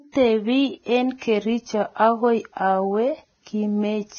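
Speech with heavy Vorbis compression throughout: nothing above 6.6 kHz, grainy noise replacing treble detail, and blurred attacks, likely from encoding at a low bitrate near 17 kbps.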